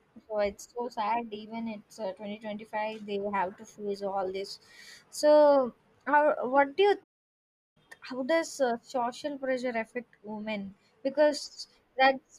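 At 7.03 s, just after "do you", the speech cuts to silence. This is a playback stall. The output stays silent for about 0.72 s, until 7.77 s. The player likely ran short of data or was blocked. The speech then carries on.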